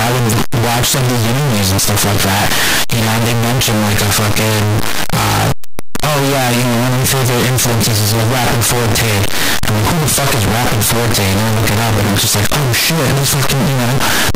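From start to end, the speech is buried in very loud, harsh distortion, and quiet moments are as loud as the rest. This is likely signed and unsigned samples mixed up in the 8-bit data. Flipping the top bit turns each zero crossing into a full-range jump.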